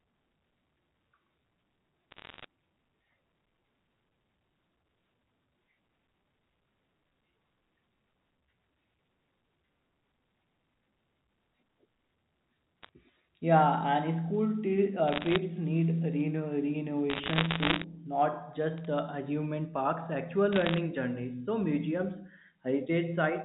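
Bursts of bit errors on a digital phone line crackle through at 2.11, 12.83, 15.08, 17.1 (the longest and densest), 18.78 and 20.53 s, the last right after "parks actual". Flipped bits corrupt single samples of the A-law stream, so hits on high bits or the sign become sharp ticks over unchanged speech.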